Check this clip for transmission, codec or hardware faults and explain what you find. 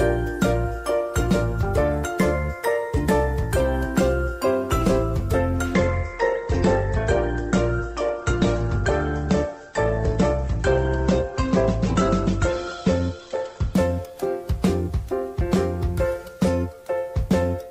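One fault stands out: an adaptive stream at a lower bitrate, running from 5.74 s to 13.74 s. The connection slowed, so the player switched to a leaner encoding of the same audio. At 5.74 s the treble abruptly disappears above about 8.2 kHz and coding artefacts thicken, which points to a drop from roughly 64 kbit/s to 16 kbit/s Opus. At 13.74 s full bandwidth returns. Unlike a dropout or buffer underrun, the sound never stops; only its quality switches.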